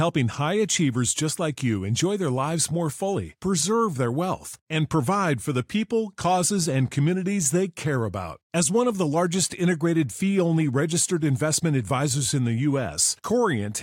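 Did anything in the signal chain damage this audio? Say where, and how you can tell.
No, nothing in the signal chain audibly damaged this speech recording; the signal holds steady throughout with no dropouts, distortion or discontinuities at any stage.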